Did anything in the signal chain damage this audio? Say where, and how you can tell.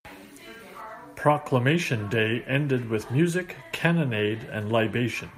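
No, nothing along the chain has left a mark on this speech that I can hear, so there's no stage to point a finger at.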